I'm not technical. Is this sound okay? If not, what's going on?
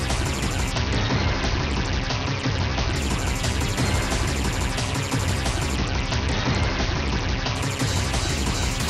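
No, there's a Bluetooth SBC bit pool drop twice, from 0.72 to 2.96 s and 5.76 to 7.55 s. The wireless link squeezed the audio, so the treble goes dull and a gritty hiss creeps in.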